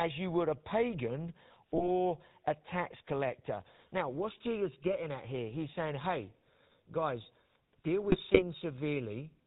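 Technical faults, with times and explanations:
Throughout: GSM full-rate codec. The speech has that gravelly, buzzy roughness you get when the voice is rebuilt from a vocal-tract model fed by a sparse, regularly spaced pulse train instead of the real excitation. Everything above 4 kHz is gone, so it's dull and boxy, and the damage is plainly audible. The sound is consistent with the old 13 kbps full-rate mode, which only keeps every third excitation sample.
1.75–1.85 s: GSM bit errors. Right after "you would a pagan" and before "a tax collector" there's a short squawky, gargled burst, roughly five frames' worth. Corrupted filter, pitch or gain values reached the decoder, so for those frames the spectrum warps and the level jumps instead of following the speech.
8.03–8.43 s: GSM bit errors. A longer run just after "saying hey guys deal", around 0.4 s of garbled popping and gargling. It sounds like about a dozen frames decoded from bad parameters, each one getting a bent spectral shape or a wrong gain.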